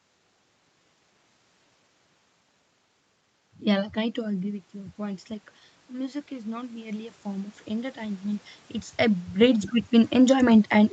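Automatic gain rising, from 3.62 to 5.33 s and again from 5.87 to 10.2 s. Around 4 s the speech drops at the microphone by about 11 dB, as the talker draws away. The gain control treats that as a quiet input and slowly raises its gain, by about 4 dB in the first stretch and about 8 dB in the second. The speech and the room noise behind it swell upward together over more than a second.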